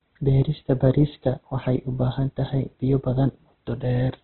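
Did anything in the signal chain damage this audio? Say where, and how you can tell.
Yes, the codec: the speech is grainy and rough throughout, with nothing above 4.1 kHz, likely Opus compression starved near 12 kbps, filling bands with noise.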